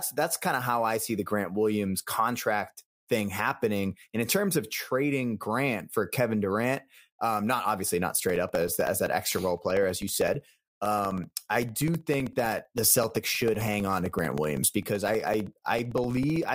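Speech, and from about 8.3 s, right after "um not obviously not", through 16.49 s it picks up periodic USB or driver dropouts. Every 0.064 s, roughly 15 times a second, a couple of milliseconds of audio drop to silence, so you hear an even, rapid ticking riding on the speech that goes quiet in the pauses. That regularity points to some background task stalling the USB bus or audio driver on a fixed timer.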